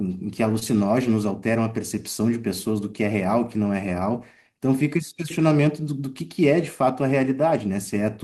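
A speech recording with one short concealed packet loss: about 20 ms of audio, which fits a single lost packet, failed to reach the decoder in time, and the receiver extended the preceding sound to cover the gap. Between 0.59 and 0.63 s this produces a brief smear before the signal blends back into the real audio.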